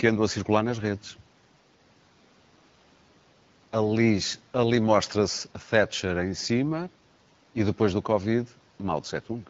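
No technical faults can be heard in the speech, which comes over an AMR wideband (HD Voice) link at 12.65 kbit/s, a rate at which that codec leaves only light traces on the signal.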